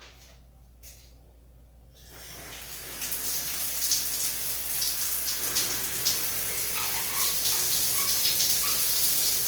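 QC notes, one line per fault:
Throughout: Opus compression, likely, with the encoder in its music mode at a rate that fits roughly 24 kbps. Band energies are kept but thinly coded, so tones turn grainy and rough rather than swirling as MP3 would, and content still reaches about 20.2 kHz.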